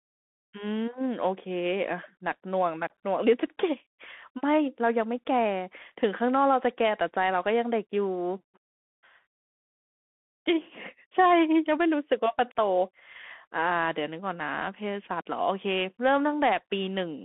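Bluetooth CVSD headset codec damage runs throughout the speech. The one-bit delta coder tracks the waveform with an adapting step, which fits a 64 kbit/s stream, and confines the band to 150 Hz to 3.4 kHz. Steep loud passages outrun the step and distort, s sounds turn scratchy, and granular hiss sits underneath.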